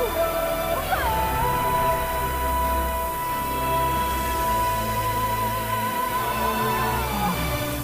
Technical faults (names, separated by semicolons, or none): low bit depth with noise shaping